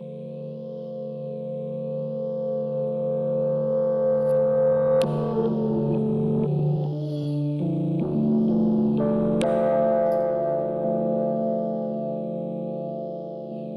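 No technical faults can be heard anywhere in this recording of sounds. Nothing in it points to a problem in how the audio was captured, processed or delivered.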